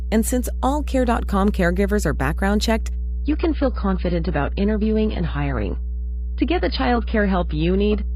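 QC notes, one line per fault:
throughout, mains hum: A ground loop or a nearby transformer is leaking the 60 Hz power line into the signal path, so a steady low tone at 60 Hz, with some low harmonics above it, sits under the speech. It is loud, only a few decibels below the speech.
3.24 to 8.15 s, adaptive stream at a lower bitrate: The connection slowed and the player switched to a much lower-bitrate version of the stream, which fits a drop from around 96 kbit/s to around 16 kbit/s. The speech loses all treble above 5.1 kHz, turns dull and smeared, and the switch is abrupt with no gap.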